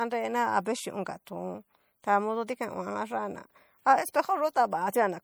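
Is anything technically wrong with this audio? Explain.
Yes. Throughout the speech there is a plainly audible watery, swirling texture, with smeared attacks. This is likely MP3 compression: short of bits, the encoder drops weak frequency lines that flicker from frame to frame, which fits a 64 kbps encode. Nothing is present above 21.1 kHz.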